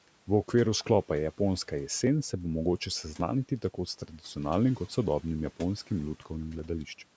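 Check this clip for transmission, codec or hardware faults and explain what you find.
One transmission fault is present: clock drift buffer slips. From 0.94 s to 6.59 s, a regular click recurs every 1.13 s during the speech. The likely cause is two device clocks differing by roughly a tenth of a percent, so the buffer between them periodically drops or repeats a few dozen samples. The audio stops at 8 kHz from the call's microphone processing, and room noise sits about 26 dB below the speech.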